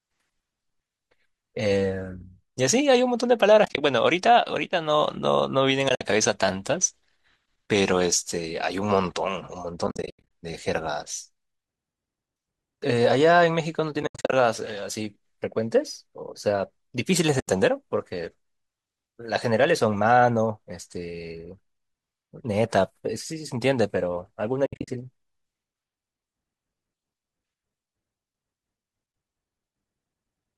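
Around 3.65 to 3.81 s, 5.89 to 6.01 s, 9.87 to 10.29 s, 14.03 to 14.33 s, 17.40 to 17.48 s and 24.66 to 24.88 s, the speech drops into soft-edged holes: AAC frame loss with muting. The decoder zeroes missing frames, so the overlapping windows fade sound out and back in. Most gaps are scattered bursts with runs up to about a tenth of a second, which fits 10 ms frames and likely low-delay AAC underneath.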